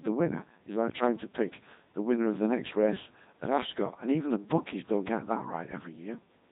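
From start to finish the speech passes through the Codec 2 vocoder, with heavy damage that points to roughly 2.4 kbit/s. Only pitch, voicing, energy and spectral envelope survive. Sine-wave resynthesis replaces the waveform, giving a robotic buzz rather than a waveform codec's smeared, warbly detail.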